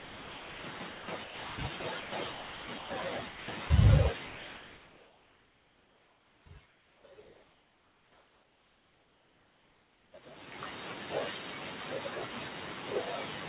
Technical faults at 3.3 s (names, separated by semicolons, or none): sound chopped by the voice detector